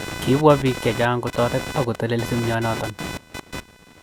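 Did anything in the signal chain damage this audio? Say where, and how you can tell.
Yes. The damage is in the analogue wiring, where the computer's shifting processor, graphics or mouse load disturbs the ground the audio circuit shares, producing computer activity noise. It runs through the whole speech clip as a buzzy, chirping scratch that pulses at somewhere around 500 Hz and sits only roughly 10 dB below the speech. It tracks the computer's activity rather than the talking, so it persists in the pauses. That independence points to ground-borne interference rather than anything in the recording itself.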